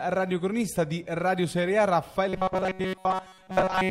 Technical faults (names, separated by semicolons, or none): robotic sound from repeated short buffers